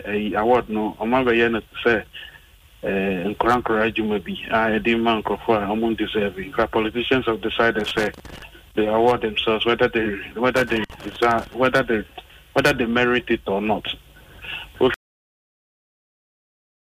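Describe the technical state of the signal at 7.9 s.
At 7.9 s the signal is inside a burst of loose connector crackle, from 7.80 to 8.42 s. A worn contact keeps making and breaking, chopping the audio into irregular scratchy pops.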